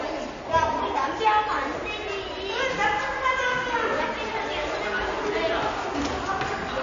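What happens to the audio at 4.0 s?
At 4.0 s the audio has the same damage heard across the whole clip. Nothing sounds above 7.2 kHz, and faint detail swirls watery. This is likely MP3 compression at a starved bitrate, fitting 32 kbps, cutting treble and dropping weak frequency lines frame to frame.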